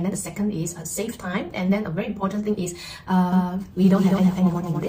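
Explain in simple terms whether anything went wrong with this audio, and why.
Something does go wrong, starting at 3.33 s and lasting to the end of the clip. There the audio suddenly gains a doubled audio track: a second, somewhat quieter copy of the same sound runs about a fifth of a second behind the original. It sounds like a hard, clean repeat rather than a room echo, because the copy has no fading tail and switches on abruptly. The likely cause is that the sound was picked up a second time through a slower path, or an edit left two copies out of step.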